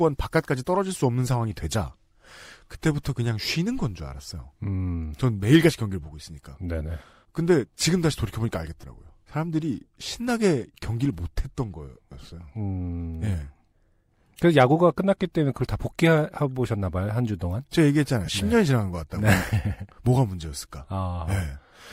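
Lost LE Audio frames occur at 8.81–8.84 s, 10.81 s, 14.29 s and 18.25–18.29 s. The LC3 decoder filled each gap of 22.5 to 30 ms by replaying the last spectrum with random signs, which fits three or four 7.5 ms frames. This briefly smears the speech into noise. At 14.29 s the losses spread across about 60 ms.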